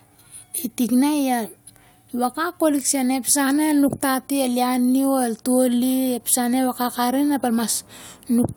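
The speech recording has no audible technical fault at any point in the signal.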